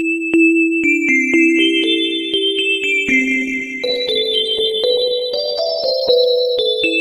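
From 3.11 s to the end, a call bitrate drop makes the sound rough and muffled as the encoder codes more coarsely. This fits a fall from 64 to 15 kbps, which bottoms out for 2.57 s. On a spectrogram, the high frequencies cut off abruptly.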